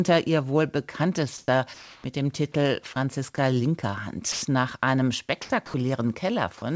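At 1.38 s the background turns flat and even for 100 ms. This is comfort noise in place of the background. The sender likely stopped transmitting during a pause, and the receiver filled the gap with synthetic noise. The real room detail is gone. The fill sits about 2 dB below the surrounding background. The same happens from 1.74 to 2.04 s, this time for 300 ms and about 1 dB quieter. At 5.42 to 5.50 s an 80 ms patch comes in about 8 dB louder than the background.

Overlapping the first patch, the onset is clipped by the voice detector. The detector was likely slow to notice the sound starting again. The first 30 ms, from 1.45 to 1.48 s, were never sent, and comfort noise covered them. The sound begins abruptly, with no soft attack.

Sound is also dropped by the voice detector. It likely mistook quiet parts of the speech for background and stopped sending. At 3.36 s a 20 ms sliver gives way to steady noise. 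From 4.32 to 4.42 s, 100 ms of speech vanishes into that noise. From 5.66 to 5.74 s an 80 ms stretch is replaced, and about 40 ms of speech is lost in it. Each time the speech returns once the detector fires again.

Throughout, nothing is heard above 8 kHz. That points to a G.722 call path.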